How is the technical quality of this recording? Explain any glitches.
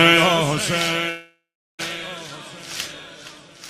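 The recording has one clear glitch, a long network dropout from 1.09 to 1.81 s. The last sound is stretched into a fading buzz, then about 0.37 s of silence follows, and the audio resumes with roughly 0.7 s lost. This is likely a network gap. On a spectrogram it shows as smeared bands dying into a blank stretch.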